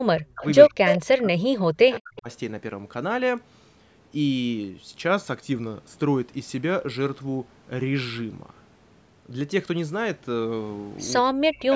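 Speech on a call, with three kinds of fault. The first is speech suppressed in double talk. From 0.0 to 0.44 s, the talker's level collapses by about 40 dB. It does so again from 0.68 to 2.29 s and from 11.29 s to the end. The voice ducks there. Both ends were likely talking at once. The echo canceller could not tell this talker from loudspeaker echo, so it pulled everything down. Inside that second dip, from 0.86 to 1.01 s, comes an echo leak. A copy of the voice returns 176 ms late, at roughly the same loudness as the speech itself. It is a short scrap, not a long tail. The far end was likely on a loudspeaker, and its canceller failed to strip out what its microphone caught. That copy was sent back down the line. At 3.38 s a sharp transient sits on top of the sound. This is an electrical switching spike. It likely came from a nearby switch, motor or static discharge arcing into the audio line. 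The band stops at 8 kHz, and the call's microphone processing has trimmed the lowest bass, as expected.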